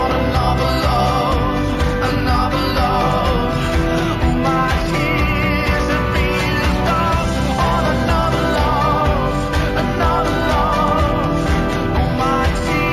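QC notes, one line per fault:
Throughout: imaging from linear upsampling. The top of the band is dulled, and a faint metallic shimmer rides on sibilants and high notes. A mirrored copy of the spectrum sits from 8 to 16 kHz, roughly 30 dB below the signal. This points to material at 16 kHz raised to 48 kHz by straight-line interpolation between samples. That acts as a weak low-pass filter, leaving spectral images above the original band edge.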